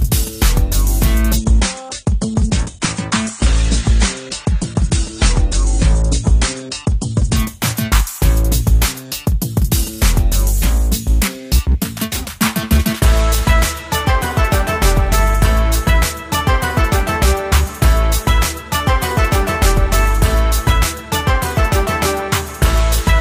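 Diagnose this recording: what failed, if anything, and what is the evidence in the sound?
The network side tripped here: an adaptive stream at a lower bitrate, from 1.37 to 7.37 s. The treble suddenly stops near 10.1 kHz and artefacts rise, with no gap, which points to the player dropping from roughly 96 to 32 kbit/s AAC while throughput sagged.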